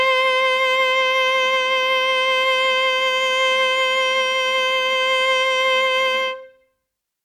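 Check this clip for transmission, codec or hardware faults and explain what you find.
The music comes through with no transmission, codec or hardware fault audible anywhere in the clip.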